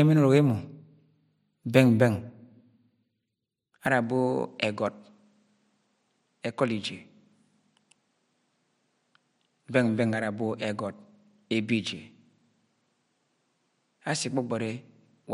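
At 3.87 s the speech changes character with no gap and stays that way. Nothing above 10.5 kHz remains, so it turns duller. It drops about 5 dB and gains a faint new background noise. The input likely switched to a poorer device.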